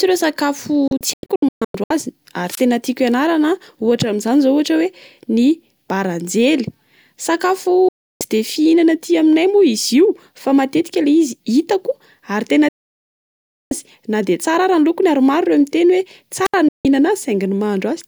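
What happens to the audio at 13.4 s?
At 13.4 s the speech sits inside a digital broadcast dropout running from 12.68 to 13.72 s. The receiver stopped getting usable frames, or the frames failed their error check, so it muted the output until valid data returned. The sound drops out within about 3 ms, leaving roughly 1.02 s of silence, and then resumes further along, so everything in between is missing. On a waveform this shows as a flat line with sharp edges, and a spectrogram shows a blank vertical band across every frequency.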